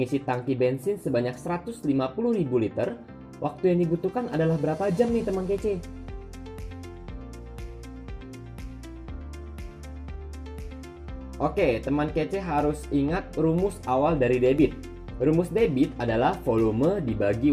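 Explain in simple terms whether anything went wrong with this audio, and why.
Nothing went wrong here: no dropouts, glitches, distortion or other faults can be heard anywhere in the recording.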